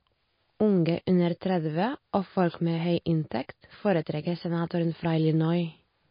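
MP3 compression, throughout: nothing sounds above 5.1 kHz and the speech turns watery, likely because an encoder starved near 26 kbps cut treble and flickered weak frequency lines.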